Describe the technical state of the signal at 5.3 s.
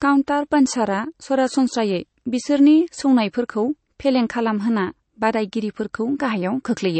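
At 5.3 s, as throughout, the speech sounds dull, with nothing above 8.3 kHz; this is likely low-bitrate MP3 audio saved at a high bitrate, the lost detail unrecoverable.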